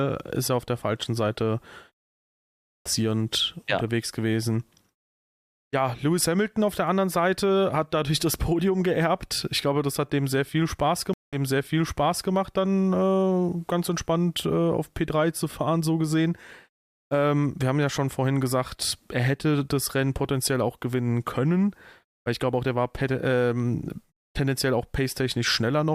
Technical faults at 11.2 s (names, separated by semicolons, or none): stream reconnect